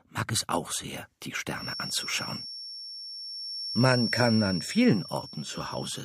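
From about 1.5 s right through to the end there's a feedback whistle, a thin, steady tone near 5.5 kHz sitting roughly 10 dB under the sound and swelling and fading slowly in level. Likely a speaker-to-mic loop hovering just at the edge of feedback without tipping over.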